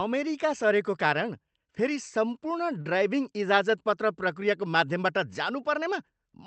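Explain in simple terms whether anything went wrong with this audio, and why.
At 2.81 s the speech briefly hangs: a short stall from a late packet. A chunk of audio arrived late, so the call software stretched the last sound for about 41 ms, to 2.87 s, then continued. Unlike a dropout, nothing is lost. A sound is just held too long.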